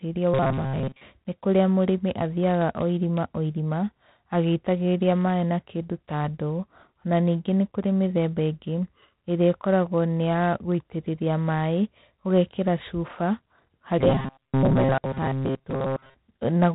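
Throughout, the speech carries G.726 ADPCM coding at 24 kbit/s. A harsh, rasping hiss tracks its level. Nothing above 3.9 kHz passes.

From 0.34 to 1.04 s and 13.99 to 16.14 s, there is robotic sound from repeated short buffers: a rigid 133 Hz metallic buzz. That fits a 7.5 ms block, likely replayed while most real audio is skipped.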